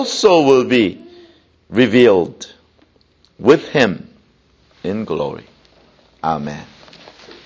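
Resampler restarted on every block, 0.5 to 3.0 s: each 250 ms block is converted without its neighbours, so edge errors tick steadily at 4 Hz.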